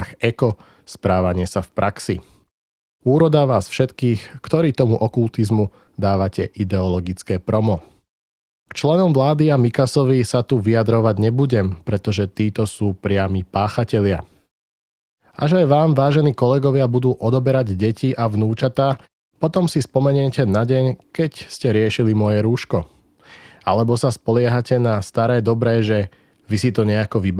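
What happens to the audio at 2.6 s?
Nothing goes wrong at 2.6 s; the speech carries on intact through that moment with no audible fault.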